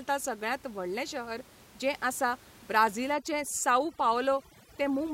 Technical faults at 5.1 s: overdone noise removal

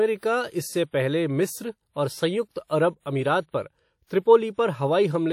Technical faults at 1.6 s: WMA compression

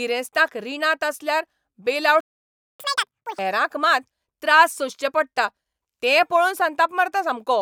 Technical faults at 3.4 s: catch-up at higher speed

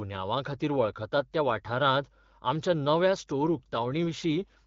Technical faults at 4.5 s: mains hum; AMR rate drop

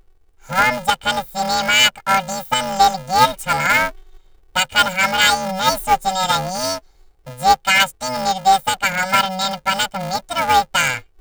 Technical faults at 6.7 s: planar audio read as interleaved

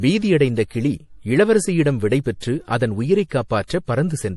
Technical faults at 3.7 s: MP3 compression; pre-echo

